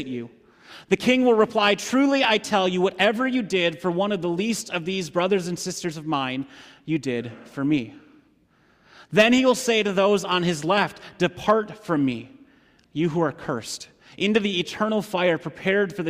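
No technical faults can be heard anywhere in this recording.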